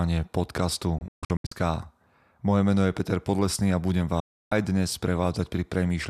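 At 0.98 s the speech breaks up in a digital broadcast dropout. The receiver stopped getting good frames and muted. Several short holes fall between 0.98 and 1.52 s. The longest lasts about 144 ms. Each cut fades in only 3 ms, so it sounds abrupt. A second dropout follows "a budem" at 4.20 s. It stays silent until 4.52 s. In both, the missing audio is simply gone.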